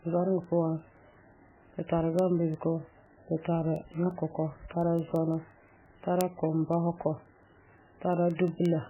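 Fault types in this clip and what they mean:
MP3 compression: likely the cause of the heavily degraded speech, with nothing above 3 kHz and a watery, swirling texture that fits a very low bitrate near 8 kbps.
Word clock ticks: an unlocked digital clock slips one sample at a time, producing sharp ticks roughly every 0.2 s from 0.27 to 8.83 s, around fifty in all.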